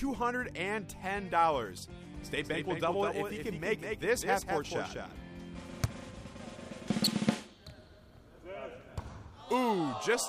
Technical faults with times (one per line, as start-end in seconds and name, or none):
2.21-5.61 doubled audio track